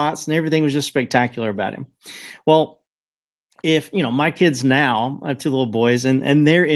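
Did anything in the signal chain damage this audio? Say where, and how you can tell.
No, nothing in the signal chain stood out as damaging this speech on listening, and the call path it travelled through, whose top end sounds consistent with an Opus link limited to around 12 kHz, comes across as working as intended.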